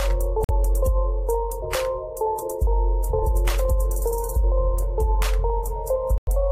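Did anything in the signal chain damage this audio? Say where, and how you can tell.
Yes. Two silences, at 0.44 to 0.51 s and 6.18 to 6.28 s, resume as though the sound had kept running underneath. This points to a likely Bluetooth dropout on the wireless playback link: late packets were discarded, muting output until valid data arrived.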